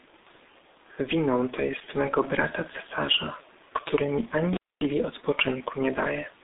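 Throughout, heavy G.723.1 codec damage is audible. Nothing passes above 3.8 kHz. The speech sounds muffled and hoarse, with smeared consonants, which fits a bitrate near 6 kbit/s.

From 4.53 to 4.85 s, an intermittent contact breaks the signal path. The sound drops out for about 245 ms, with crackle at both edges.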